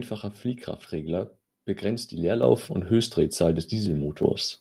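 Just after "begrenzt die" at 2.43 s, and again at 4.23 s, the microphone volume stepped up by about 7 dB and then about 5 dB. Each time, the call software raised the input gain in one step, so voice and background jump together instantly rather than swelling gradually.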